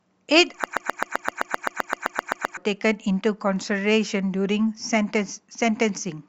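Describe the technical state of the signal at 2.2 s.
At 2.2 s the speech is caught in a broken-record loop lasting from 0.64 to 2.57 s. A 129 ms fragment repeats identically 15 times, likely from a stalled stream resending its last buffer. Unlike an echo, nothing decays, and the missing speech never returns.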